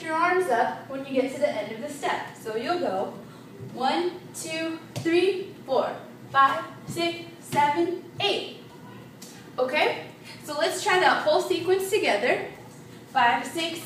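No technical faults are audible.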